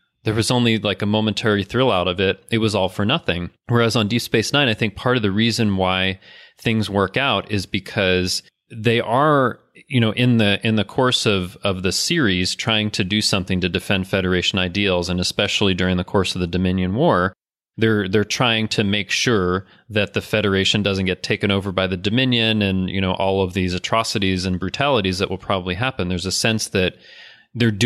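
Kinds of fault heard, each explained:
Nothing in the way of a fault turns up anywhere in this speech, so there's no kind to list here.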